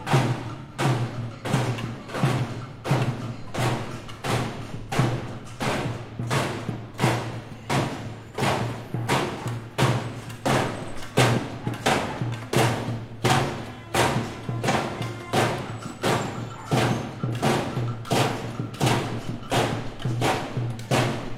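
Sounds, with AAC frame loss with concealment at 0.60, 4.79 and 14.69 s. Each spot turns briefly smeared and noisy. The decoder is filling missing frames from the last good spectrum. The first two gaps fit about 85 ms lost, the third about 43 ms.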